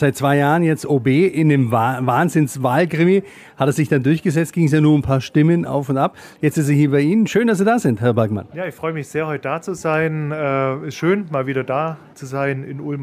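At about 9.94 s there's a bit error spike, a single sharp tick that has nothing to do with the surrounding sound. What happened is that a bit got flipped somewhere in storage or on a digital link, knocking a run of three consecutive samples off by a power of two before they snap straight back. Because it's so brief, the energy smears across the whole spectrum, so you hear a dry, broadband click peaking at about -27 dBFS.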